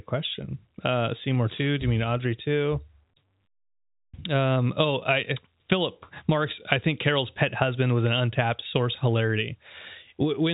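Nothing goes wrong anywhere in this speech, which reaches the listener over the call path as ordinary G.711 A-law audio at 64 kbps, with the familiar telephone band that stops at 4 kHz.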